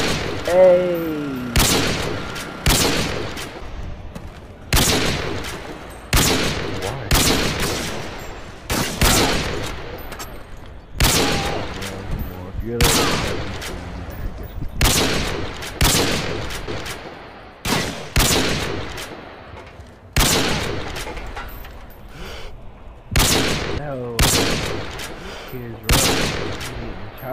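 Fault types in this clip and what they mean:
dropped buffer (overrun): a small skip forward at 10.99 s and 22.00 s, likely from roughly 10 ms of samples overwritten before being collected.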